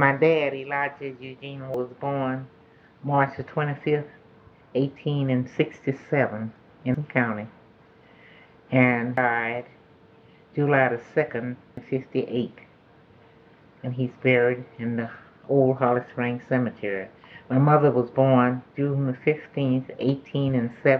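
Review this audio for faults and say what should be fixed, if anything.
There are compressed frames skipped at 1.74, 6.95, 9.17 and 11.77 s. At each point the audio jumps forward, losing roughly 0.3, 0.4, 0.4 and 0.5 s respectively. The jumps land on whole multiples of a block length, which points to frames of about 93 ms, so roughly three to five frames per dropout. Those frames are either missing from the file or were rejected by the decoder as corrupt. To prevent it, re-encode from the original source and verify the file's integrity before delivery.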